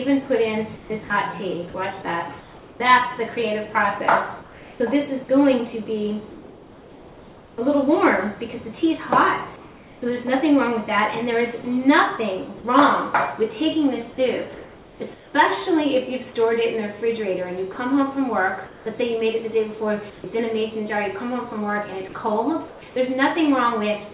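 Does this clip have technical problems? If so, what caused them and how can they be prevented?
Yes. Between 0.76 and 11.64 s the sound is chopped by the voice detector: the signal repeatedly cuts in and out, and about 2.8 s in total is replaced by flat synthetic hiss, so the background flickers between real and artificial. The likely cause is a voice activity detector with too high a threshold or too short a hangover, dropping quiet passages and edges and sending comfort noise instead. Lowering the detection threshold, lengthening the hangover, or disabling discontinuous transmission prevents this.

Comfort noise replaces the background at 14.54–15.34 s (about 0.66 s replaced), across 17.72–20.24 s (about 0.38 s), and at 22.68–22.82 s (about 0.14 s). In these pauses the textured real background gives way to steady, featureless noise. In the last gap the background sits about 23 dB below the loud parts, and the fill is only about 1 dB quieter. 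This is likely discontinuous transmission stopping the stream during silence, with the receiver generating noise. Keeping transmission continuous, or improving the comfort-noise spectral updates, avoids the swap.

At 17.72 s the sound is dropped by the voice detector: about 40 ms of real sound vanishes into comfort noise before the detector triggers again. This is likely a quiet onset or tail misjudged as background. Adding a hangover and a small lookahead to the detector keeps such edges intact. The audio also passes through a G.711 mu-law call path at 64 kbps, which leaves nothing above 4 kHz.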